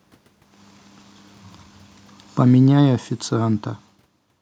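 From 2.4 s to 4.37 s the automatic gain control is falling, pulling the level down by about 6 dB after it judged the input too loud or its background noise too strong. The speech and the room noise sink together, which separates it from the talker's own movements around half a second and 4 s.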